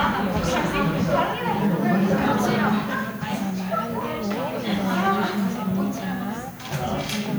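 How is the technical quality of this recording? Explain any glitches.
The technical quality is poor. A steady, thin hiss runs through the whole recording and gets noticeably brighter toward the top of the band. That is low bit depth with noise shaping. The amplitude steps are coarse, pointing to 8-bit samples, and the rounding error has been pushed up into the highest frequencies. The hiss sits only around 25 dB below the sound.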